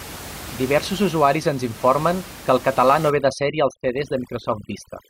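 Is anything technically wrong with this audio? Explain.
Yes. From 3.1 s to the end, right after "que el català no", overdone noise removal sets in. The noise reducer, working against room noise about 17 dB below the speech, cuts frequency bands near its noise estimate far down, taking soft parts of the voice too. The background drops and breaks up into twinkling specks.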